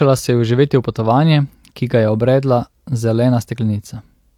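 No technical faults are audible anywhere in this recording.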